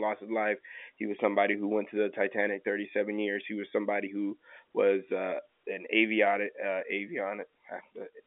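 No faults: speech on a telephone line with G.711 A-law coding, the band running from about 250 Hz to 3.4 kHz with nothing above 3.6 kHz, and the codec's quantisation noise faint at most.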